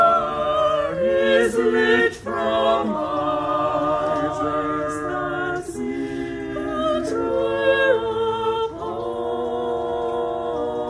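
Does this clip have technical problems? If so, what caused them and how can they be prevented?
No, there are no technical problems to point to in this clip. Nothing in the sound calls for a cause or a preventive step.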